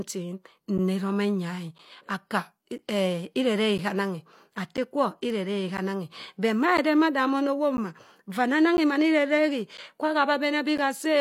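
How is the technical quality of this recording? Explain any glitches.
Periodic USB or driver dropouts: from 0.78 to 10.79 s, about ten short gaps occur once per second. A blocked audio path drops around 10 ms each time, filled with silence, heard as ticks only during speech. Unlike random packet loss, their spacing is strictly regular.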